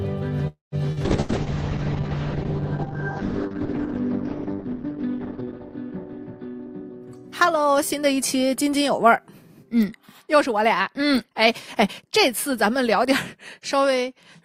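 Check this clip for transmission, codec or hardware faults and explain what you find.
Five kinds of network and codec fault are audible, all typical of a packet-based call using Opus.

From 0.47 to 0.75 s there is a call audio freeze. The last sound is stretched into a fading buzz and then roughly 150 ms of silence before the audio carries on exactly where it left off. About a quarter of a second of delay is added, but nothing is lost. The likely cause is packets held up in transit until the jitter buffer ran dry. What separates this from packet loss is that the audio resumes with no content missing.

At 0.92 to 0.99 s a short concealed packet loss leaves a brief smear. About 40 ms of audio never reached the decoder, and the receiver bridged the hole by extrapolating the preceding sound before blending back into the real signal. Unlike the freeze, material is genuinely gone here, but the gap is short enough that it reads as a wobble rather than a pause.

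A call bitrate drop runs from 1.06 to 8.29 s. The encoder rate falls from 48 kbps to 7 kbps and stays at its lowest for about 4.3 s. The coded bandwidth narrows from 20 kHz to 6 kHz, so the sound turns muffled and rough, with a watery texture. This followed a fall in the call's bandwidth estimate. Because it is a sustained change in tone quality rather than a gap, it cannot be mistaken for any of the loss events.

Inside that stretch, at 1.20 to 1.32 s, a burst of packet loss removes about 80 ms. The receiver holds the last sound as a decaying buzz or hiss, then jumps ahead with the intervening audio missing. It is longer than the 0.92 s loss. Unlike the freeze, the audio does not pick up from where it stopped.

Two jitter buffer speed-ups follow. The first runs from 6.01 to 7.10 s at 112% speed and trims around 150 ms. The second runs from 10.22 to 10.83 s at 109% and trims about 70 ms. 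In both, the receiver cut many pitch-period-sized slices to shed excess buffered delay. The audio sounds hurried while the pitch stays the same, which is what distinguishes this from a playback-rate error.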